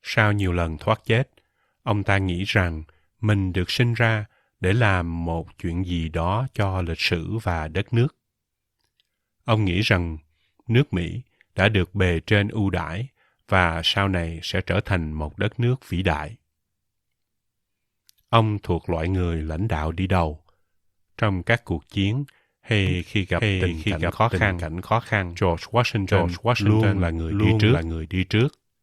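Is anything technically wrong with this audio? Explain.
Yes. From 22.87 s to the end, there is a doubled audio track. The speech was likely captured a second time through a slower path, so a full-band copy at roughly equal level trails about 0.7 s behind. It cuts in abruptly, with no decay or room colour.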